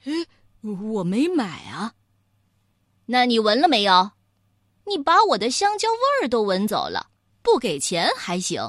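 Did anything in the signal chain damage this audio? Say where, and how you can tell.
Yes. At 6.68 s the speech skips forward with no silent gap, which points to a likely dropped buffer (overrun) at the driver stage: about 20 ms went uncollected and was overwritten, so the two sides butt together. A network dropout would instead leave a silence or concealment.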